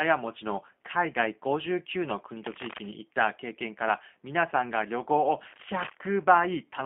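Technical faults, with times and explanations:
Throughout, G.729 codec: speech sounds rough and synthetic, as the audio is rebuilt from a vocal tract filter, pitch predictor and sparse pulses, consistent with 8 kbit/s. On a spectrogram, energy stops sharply near 3.4 kHz, with little below 200 Hz.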